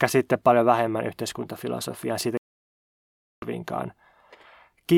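At 2.37 s, after "paljon vähemmän yhteiskuntafilosofiaa siitä", a stream reconnect drops the speech to silence until 3.45 s, then resumes from a point roughly a second later.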